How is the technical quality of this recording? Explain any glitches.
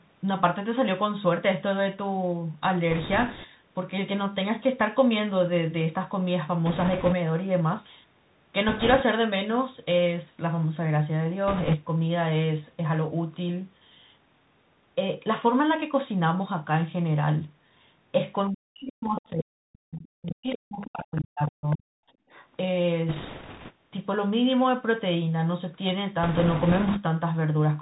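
The recording is narrowband and damaged throughout, with several separate glitches on top.

Across the whole clip the Bluetooth CVSD headset codec is plainly audible. It sends one up-or-down bit per sample at 64 kbps and adapts its step size, so nothing above 4 kHz survives. Loud, bright speech outruns the step and distorts, s sounds turn scratchy, and a granular hiss sits underneath.

Bit errors on the Bluetooth voice link appear at 2.91–3.46 s, 6.66–7.14 s, 8.69–9.03 s, 11.48–11.76 s, 23.09–23.73 s and 26.23–27.00 s. Flipped bits each carry little weight and decay quickly, so instead of clicks there is a rushing crackle. It is heaviest in the last burst, at around 7 percent of bits.

Speech is suppressed in double talk from 18.5 to 21.89 s, for roughly 3 s in total. The talker's level dips, thins and breaks up, falling by as much as about 40 dB. The likely cause is an echo canceller that could not separate near speech from loudspeaker echo and turned both down.

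The other side's voice leaks through in short scraps at 19.16–19.21, 20.26–20.31, 20.52–20.58, 20.81–20.90, 21.70–21.76 and 22.30–22.47 s. These sit roughly 15 to 30 dB below the main speech. This is likely loudspeaker pickup left behind by incomplete echo cancellation.

The background is gated by the echo canceller at 22.17–22.29 s. The room sound drops by about 25 dB for roughly 100 ms, then returns. The canceller clamped the microphone hard while the loudspeaker played and released it afterwards. The call microphone processing's bass high-pass shows no audible problem.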